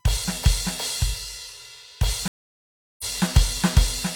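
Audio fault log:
throughout USB whine: USB frame current leaks through power or ground, adding a steady 1 kHz tone about 45 dB below the music.
2.28–3.05 s stream reconnect: connection drops and a fresh decoder restarts mid-stream, leaving 713 ms of silence before the music resumes roughly half a second further on.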